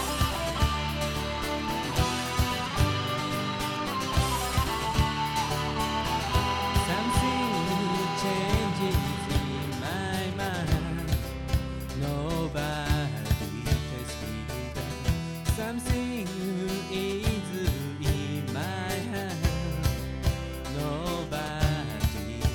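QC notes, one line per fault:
No audible faults found.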